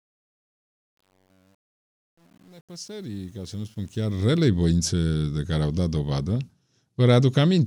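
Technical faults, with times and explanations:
0.00–4.49 s, truncation distortion on a fade: the fade is rendered at a resolution that fits a 9-bit path with no dither, so the quiet signal collapses into a few square steps and sounds gritty, worst from 0.00 to 3.56 s, before "voințe de care au".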